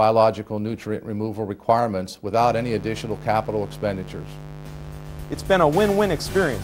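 Mains buzz enters at 2.41 s and runs to the end: a steady, raspy buzz roughly 15 dB below the sound, built on 50 Hz harmonics reaching into the kilohertz range, as sharp switching spikes from a dimmer, rectifier or unshielded cable leak in twice per mains cycle.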